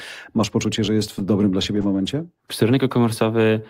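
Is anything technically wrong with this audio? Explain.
Yes. From 1.19 to 2.01 s, right after "poczucie że jest w", the speech has scattered short gaps: about five tiny packet losses, none much over 10 ms, each patched by extending the previous sound, leaving brief ticks and smears rather than one audible silence.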